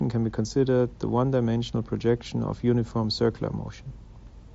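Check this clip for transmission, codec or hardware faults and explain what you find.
The speech comes through a Bluetooth mSBC headset link in sound technical order, with content stopping near 7.7 kHz and only the light coding texture that wideband codec leaves, and nothing in the transmission, codec or hardware path stands out as faulty.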